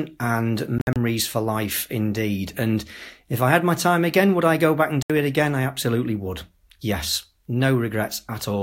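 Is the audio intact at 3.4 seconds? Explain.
Yes, the speech at 3.4 seconds plays through intact, with no dropout, click, distortion or other fault at that moment.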